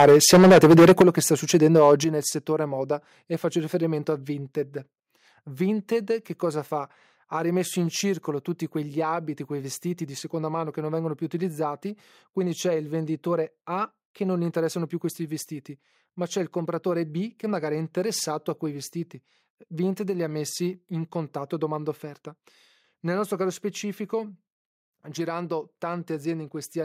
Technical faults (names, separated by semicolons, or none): microphone overload; microphone volume stepped down